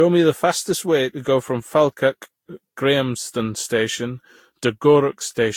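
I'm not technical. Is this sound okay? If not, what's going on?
No. Generation loss runs through the whole clip: the speech sounds swirly, smeared and hollow, with blurred consonant starts. It has likely been compressed and decompressed about seven times over, each pass adding fresh noise and gaps to the sound.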